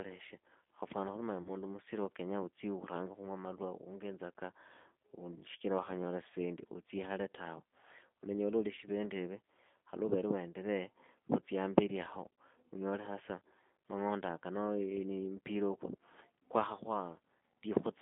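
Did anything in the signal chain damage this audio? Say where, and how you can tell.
Yes. G.729 codec damage runs through the whole speech clip at the codec stage. The line is confined to about 200 Hz to 3.5 kHz, and the 8 kbit/s pulse-based reconstruction leaves speech plainly rough and synthetic, since the codec rebuilds each 10 ms frame from a filter, pitch predictor and few pulses.

VoIP packet loss concealed by the speech codec appears at the network stage at 1.42–1.50 s, right after "khuli manya", and again at 8.75–8.79 s. Each gap of about 30 ms fits a single lost packet. The decoder stretches its last pitch and filter at falling gain, so speech smears and weakens before recovering.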